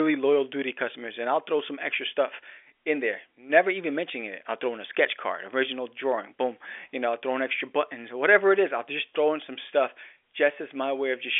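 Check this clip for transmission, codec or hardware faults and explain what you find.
No transmission, codec or hardware faults are audible; the speech carries the narrow 250 to 3400 Hz band of an ordinary fixed-line call, consistent with G.711 A-law telephone coding at 64 kbps, with at most a faint level-following quantisation hiss well beneath it.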